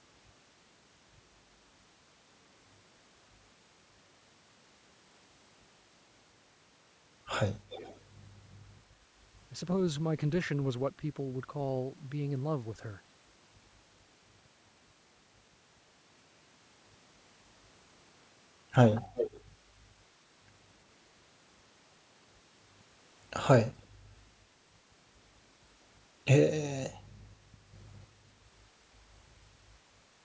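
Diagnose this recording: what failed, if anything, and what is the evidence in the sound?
Call processing stage: an echo leak at 7.7 to 8.0 s (faint) and 19.15 to 19.41 s (louder). A discrete copy of the speech trails by 351 ms, unlike reverb's smeared tail, which likely means a loudspeaker echo canceller let that copy through.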